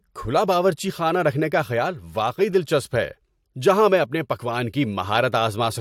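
No technical faults can be heard anywhere in this speech recording. Nothing at any point in the audio calls for comment.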